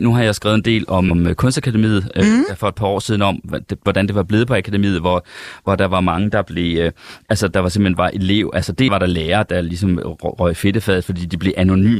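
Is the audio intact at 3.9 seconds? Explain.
No. At about 3.86 s, just before the moment asked about, the speech is interrupted by damaged data in a compressed stream. The event lasts only a few milliseconds and is heard as a short chirp, squawk, click or hole. Some of the coded bytes there are corrupted, so the decoder misreads the affected frame, loses its place in the bitstream, and has to hunt for the next valid frame header before it can resume normal decoding.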